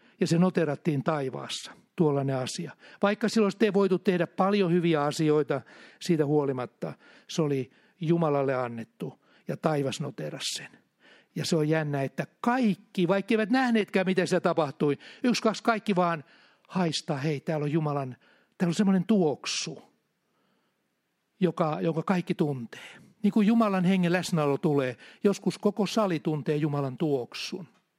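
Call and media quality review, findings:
Crude rate conversion, 22.39–27.98 s, after "joka jonka kaikki": gritty inharmonic fizz on speech. Nearest-sample 48 kHz to 44.1 kHz resampling, no filter; spectrogram shows faint non-harmonic lines, error about 30 dB down.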